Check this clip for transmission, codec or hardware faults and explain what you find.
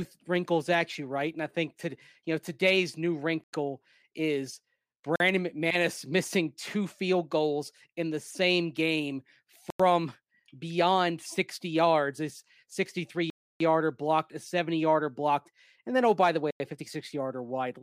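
Five blocks of digital silence interrupt the speech. The playback chain probably failed to deliver samples in time, so stretches were filled with zeros. The sound drops to dead silence and returns with no fade.

Three gaps last about 93 ms each, which fits a 4096-sample buffer going unfilled. They fall at 3.44 s after "you know today's new", at 9.70 s after "in the same game" and at 16.51 s after "oh by the way". The other two are at 5.16 s (43 ms) and 13.30 s (303 ms). All five are heard as short holes.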